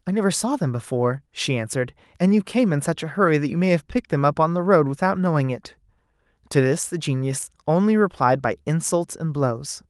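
No technical faults can be heard anywhere in the recording.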